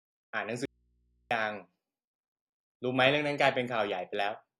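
At 0.65 s the speech cuts off abruptly and, for about 650 ms until 1.31 s, only a low mains hum remains, sitting far below the normal level, roughly 40 dB down. There is no fade in or out; the speech simply stops and restarts. This is an audio dropout to a faint residue: the signal was likely lost upstream while the rest of the chain stayed live, so the open input's hum fills the gap.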